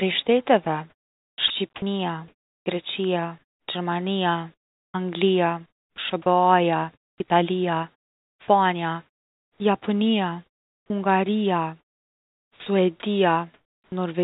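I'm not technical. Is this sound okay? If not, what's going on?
No. The problems are the kind a phone or internet call system makes when it tries to save data by not sending sound it judges to be silence.

Sound chopped by the voice detector: From 0.64 to 3.68 s and again from 4.54 to 9.6 s, the system's speech detector likely kept switching transmission off and on. About 1.3 s and then 2.1 s of real sound were replaced with fake filler hiss, so the speech sounds choppy.

Comfort noise in place of the background: In the pauses at 10.46 to 10.9 s, 11.8 to 12.66 s and 13.54 to 13.92 s, the system stopped sending sound. The listener's end likely filled those gaps with a smooth artificial hiss. The natural room sound is swapped for a flatter, quieter noise.

Onset clipped by the voice detector: At 12.47 s, the speech detector was likely slow to notice that talking had resumed. The first 0.19 s wasn't sent and was covered with filler hiss, so the speech begins abruptly, missing its soft start.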